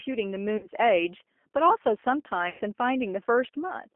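Throughout, the speech sounds narrow, slightly rough and synthetic, with plainly audible coding damage and nothing above the 250 Hz to 3.4 kHz telephone band. This is the G.729 codec, which rebuilds each frame from a vocal tract filter and a few pulses, consistent with an 8 kbit/s G.729A coder.

From 0.57 to 0.67 s, and again from 2.50 to 2.61 s, the sound smears into a buzzy tone or coloured noise that fades, and the voice stays weak or distorted for a moment after it returns. This is VoIP packet loss concealed by the speech codec: about 60 ms and then 100 ms of audio went missing, fitting roughly three and five lost packets. The decoder stretched its last pitch and filter while lowering the gain.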